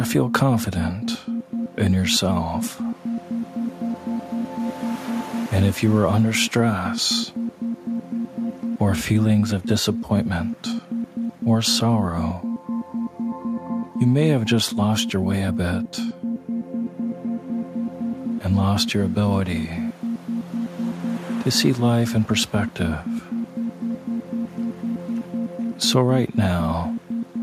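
No technical fault can be heard anywhere in this audio. There is nothing in it that needs a time or a cause pinned to it.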